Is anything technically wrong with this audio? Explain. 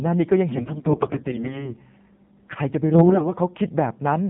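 Yes. AMR narrowband mobile codec, throughout: the speech went through a narrowband speech coder that models the vocal tract and drives it with sparse pulses. Nothing above 4 kHz survives, and the voice sounds plainly buzzy and synthetic, which fits a low mode around 7.4 kbps.

AMR bit errors, from 0.50 to 1.70 s and from 2.92 to 3.32 s: corrupted low-priority bits slipped past the frame checksum, with something like one bit in ten flipped. Misplaced excitation pulses and wrong fine gain and spectral values make the voice hoarse, scratchy and gargly, while its pitch and level stay roughly intact.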